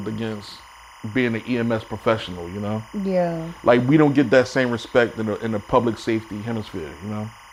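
Timecode bleed runs through the whole of this speech clip. Linear timecode at 25 frames per second has leaked in from a neighbouring track or cable. Its square wave flips between roughly 1 and 2 kHz, giving a steady chirping warble about 25 dB beneath the speech.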